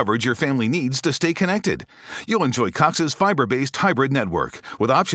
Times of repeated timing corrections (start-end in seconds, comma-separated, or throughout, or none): 1.42-4.59